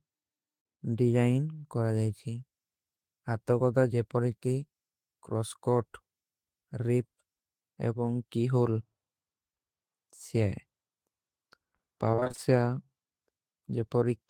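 Repeated packet loss hits this speech recording from 12.11 to 12.39 s: short dropouts up to 27 ms, about half the stretch, are patched by extending prior sound, leaving it choppy and robotic.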